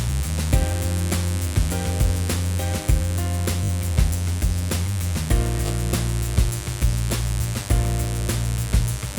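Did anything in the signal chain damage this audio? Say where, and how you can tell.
Yes. In the analogue wiring, sharp switching spikes got into the signal twice per 50 Hz cycle, laying a steady, raspy mains buzz under the whole clip. Its harmonics climb well above 50 Hz, and it sits fairly prominently, roughly 15 dB below the sound.

At the codec or storage stage, short runs of compressed frames were played again: the stretch from 3.63 to 3.70 s repeats three extra times, and 5.65 to 5.70 s twice. Each repeat is a stutter, fitting 20 ms frames and adding 60 ms and 40 ms.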